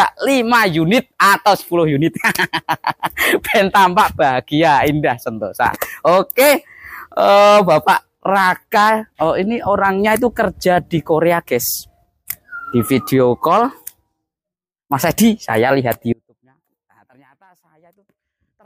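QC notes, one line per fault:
16.13 s to the end, audio dropout to a faint residue: the signal path most likely lost its source while the downstream chain stayed live, so the level falls away abruptly rather than fading or pausing. The audio drops to a faint residue, roughly 35 dB under its normal level, and never recovers before the clip ends, leaving only that thin remnant where full-level sound should continue.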